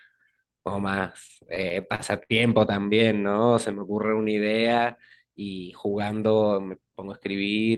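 From 1.27 to 2.33 s the speech catches and drags in nine brief hitches, each a moment where the last sound is held on instead of moving forward, the longest about 65 ms. These are repeated stalls (stutter): packets reached the receiver late or more slowly than playback consumed them, so the jitter buffer kept running dry. The receiver bridged each hole by extending what it had already played, about 181 ms in total, roughly a sixth of that stretch, so nothing is lost, only delayed.

Between 3.17 and 4.29 s the speech turns sluggish, running at about 89% of its normal rate while the pitch stays put, with sounds stretched out longer than they should be. This is a jitter buffer slow-down. With its reserve running short, the receiver repeated single pitch cycles and fragments of pauses over and over, inserting 132 ms of extra material to rebuild the cushion, which is what draws the delivery out without lowering it.

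From 6.26 to 7.34 s the opposite happens: the speech runs quicker, at about 110% of its normal rate, yet its pitch is unchanged. This is a jitter buffer speed-up. The buffer held more audio than its target, so the receiver trimmed the excess by cutting out short pieces one or a few pitch cycles long, again and again, removing about a tenth of a second in all and pulling the delay back down.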